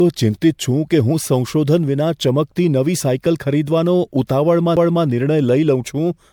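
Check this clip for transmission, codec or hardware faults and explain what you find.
Two faults are present: one running through the whole speech clip, and one brief event near the end.

Throughout, the audio sounds swirly, hollow and smeared, with blurred attacks and nothing above 19.9 kHz. This is likely generation loss from roughly four MP3 passes, consistent with 96 kbit/s.

At 4.76 s there is a CD skip: a tick and a mute of a few milliseconds as the laser jumps tracks, so playback resumes from a different point on the spiral.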